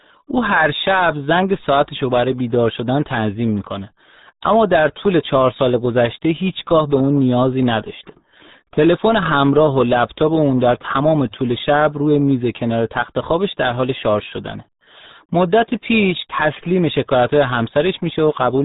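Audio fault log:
throughout, RealAudio 14.4 codec: speech sounds muffled and gargly, with nothing above 3.8 kHz; the heavy damage fits a dial-up-era 8 kbit/s stream.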